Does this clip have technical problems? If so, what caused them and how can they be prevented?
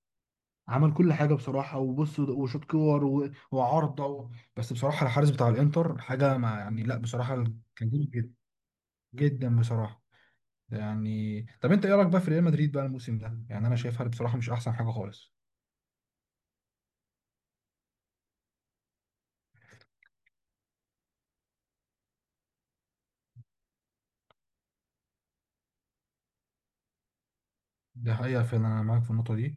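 No, this speech clip has no technical faults to point to. Since nothing went wrong, there is no cause to trace and nothing that needs preventing.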